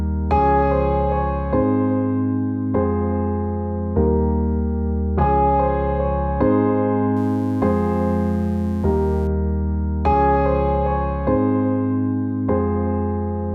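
From 7.17 s to 9.27 s a mains buzz sits under the sound. It is a steady, raspy buzz rather than a clean hum. The cause is sharp switching spikes from a dimmer, rectifier or poorly shielded line leaking into the signal. They come twice per cycle of 60 Hz mains. That spreads harmonics of 60 Hz up into the kilohertz range. The buzz sits well below the main signal, roughly 30 dB down.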